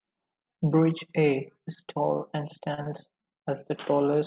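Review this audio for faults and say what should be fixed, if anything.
Repeated packet loss (robotic sound), 2.74 to 3.46 s, after "is tall and": six brief holes, up to 33 ms, are filled by extending prior sound, giving choppy speech. Enabling forward error correction or redundant audio on the call link, with a slightly deeper jitter buffer, would prevent these dropouts.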